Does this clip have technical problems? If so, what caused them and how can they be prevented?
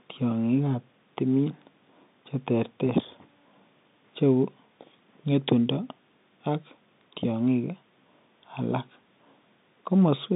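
No, no technical faults here.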